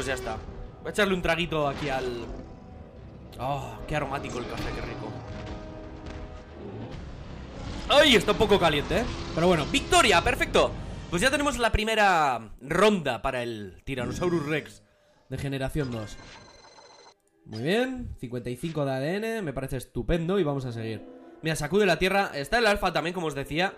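No technical fault can be heard anywhere in this audio. There is nothing in it to time or trace to a cause.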